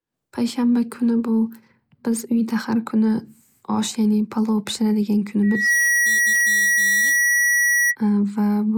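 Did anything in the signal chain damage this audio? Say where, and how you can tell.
Yes, there's loudspeaker feedback squeal at the analogue stage, where the mic is hearing its own speaker. From 5.43 s a 1.9 kHz tone swells up within about a third of a second, sits around 5 dB above the speech, and holds until 7.96 s. Loop gain went past one at that frequency.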